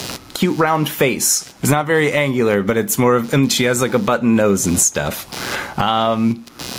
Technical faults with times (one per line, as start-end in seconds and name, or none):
0.00-6.78 computer activity noise
0.00-6.78 gain pumping